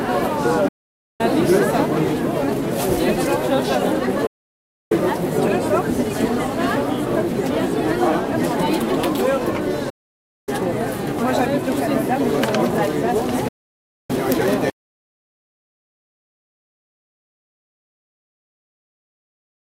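At 0.68 s the sound mutes until 1.21 s. It happens again at 4.26 to 4.92 s, 9.90 to 10.49 s and 13.48 to 14.10 s. These are digital broadcast dropouts. The receiver lost good frames and muted, with an 8 ms fade at each edge. Each hole lasts about half a second, which fits whole frames of roughly 32 ms.

From 14.70 s to the end, the sound cuts to silence with no room tone. This is an audio dropout to silence. The likely cause is a lost input, such as a disconnected device, a failed link or a stray mute, while recording continued.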